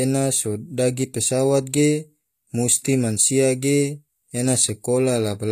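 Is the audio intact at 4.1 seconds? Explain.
No, at 4.1 seconds, as throughout, it's likely HE-AAC compression: the treble above 14.9 kHz is gone and rebuilt copied highs make sibilants gritty, which fits roughly 24 kbps.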